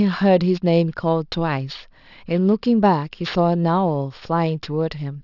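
Aliasing runs through the whole clip. The rate was halved without filtering first, which fits a drop from 24 kHz to 12 kHz. Content above 6 kHz folds back down. Sibilants sound gritty and metallic. The false tones sit roughly 25 dB under the speech.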